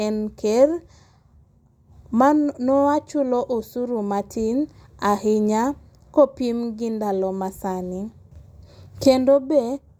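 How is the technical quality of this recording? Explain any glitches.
No technical faults or glitches can be heard anywhere in the speech recording; the signal stays steady and intact throughout.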